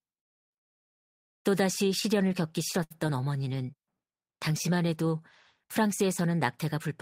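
At 2.83 s the speech hangs briefly, until 2.92 s. This is a short stall from a late packet. The packet arrived late and the jitter buffer ran dry. About 70 ms of the last sound was stretched. Nothing is lost, but playback now runs 70 ms later.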